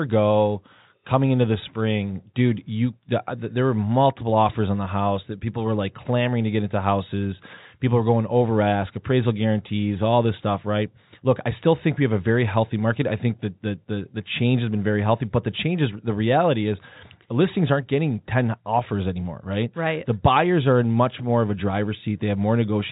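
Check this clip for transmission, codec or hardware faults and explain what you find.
No transmission, codec or hardware faults are present in the speech, which carries the expected G.711 telephone coding with nothing audible above 3.8 kHz.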